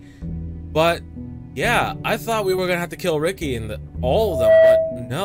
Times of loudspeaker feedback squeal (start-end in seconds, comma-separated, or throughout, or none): 4.20-5.17